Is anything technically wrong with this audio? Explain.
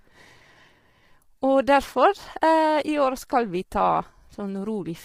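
Yes. Low-delay AAC compression runs throughout the speech. The speech is rough and grainy, with a hiss-like fill between the pitch harmonics and a top band that sounds thin and synthetic. The likely cause is AAC-ELD, the low-delay coder used in video calls. Its short frames of about 10 ms separate closely spaced harmonics poorly and use bits inefficiently. The heavy damage fits a low bitrate of around 24 kbps.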